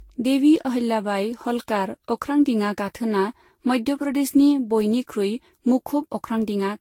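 Generation loss runs throughout this speech: swirly, hollow smearing, blurred attacks and nothing above 16.6 kHz, likely from about seven Vorbis passes near 60 kbit/s, each pass stacking fresh quantisation damage.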